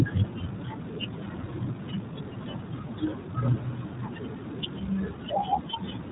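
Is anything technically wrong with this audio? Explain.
Yes. Throughout the clip, the speech has passed through the iLBC codec. This narrowband VoIP coder codes the excitation of each short frame independently of the one before, and the character here fits 20 ms frames at around 15.2 kbps. Nothing above 3.8 kHz survives, so the speech sounds muffled and telephone-like, missing its crisp sibilance. The frame-by-frame coding leaves a plainly audible roughness and a slightly synthetic, buzzy edge on the voiced sounds.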